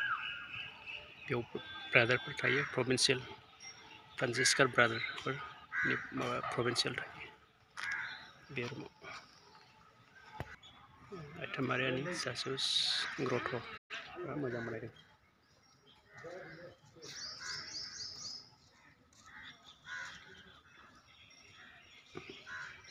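The sound cuts to silence at 13.77 s and resumes at 13.91 s. This is a playback stall, likely the player running short of data. From 13.91 to 15.09 s a time-compressed catch-up follows, running about 1.1 times fast to clear the backlog. The pitch stays normal, unlike a resampling speed-up, which would raise the pitch.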